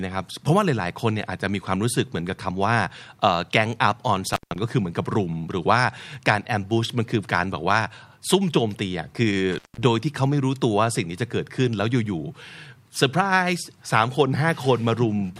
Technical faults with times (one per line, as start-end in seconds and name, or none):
4.26-4.56 intermittent contact
9.52-9.82 intermittent contact